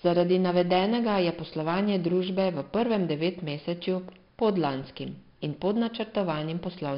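Speech, heavily degraded by 4-bit ADPCM compression throughout: a gritty hiss that rises and falls with the voice, roughness on sharp onsets, and nothing above 5.3 kHz, which fits a sample rate near 11 kHz. Unlike perceptual codecs, there is no swirly warbling, just level-tracking grit.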